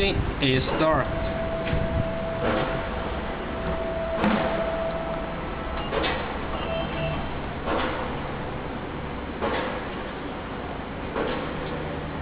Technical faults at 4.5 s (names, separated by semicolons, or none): none